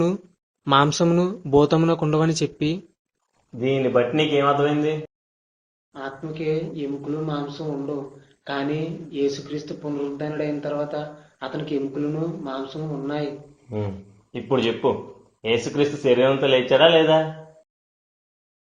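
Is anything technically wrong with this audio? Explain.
No technical faults are audible.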